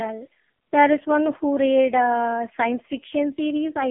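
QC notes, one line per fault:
Throughout: AMR narrowband mobile codec, and a heavily squeezed one. Everything above 3.4 kHz is gone and the lows thin out below about 250 Hz, so it sits in that boxy phone band. The speech comes across buzzy and synthetic because the codec rebuilds it from a vocal-tract model fed by a handful of pulses per frame. That degree of damage points to the very low end of AMR-NB, around 5.15 kbps.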